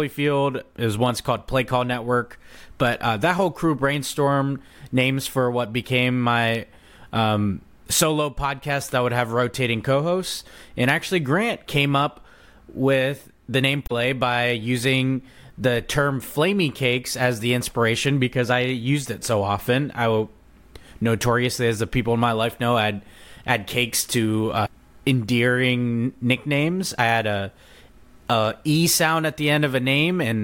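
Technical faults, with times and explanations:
13.83–13.92 s and 24.62–24.69 s, damaged data in a compressed stream: two quick blips, one right after "up with the name" and one after "add add cakes to". Corrupt bytes threw the decoder off sync, so it garbled those frames and hunted for the next header.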